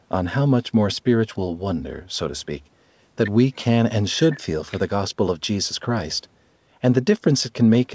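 No technical faults heard.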